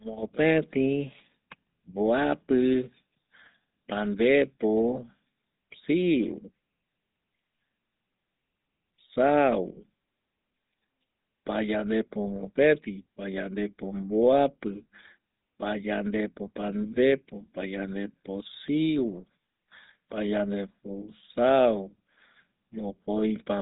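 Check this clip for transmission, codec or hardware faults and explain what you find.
One codec fault runs through the whole clip: GSM full-rate coding. The codec models the vocal tract as a filter and excites it with pulses on a fixed grid, keeping only a third of the excitation samples, at a rate consistent with the 13 kbps full-rate mode. Nothing survives above 3.8 kHz. The result is plainly audible: the speech has a buzzy, gravelly roughness from the coarse pulse excitation, with a dull, band-limited top end.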